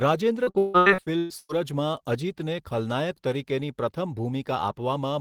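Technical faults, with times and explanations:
0.43–1.52 s, repeated packet loss (robotic sound): about eight dropouts, the longest near 157 ms, each patched by stretching the preceding sound, so over half the span is synthetic fill that sounds choppy. The spectrogram shows smeared, repeated harmonic blocks between abrupt breaks.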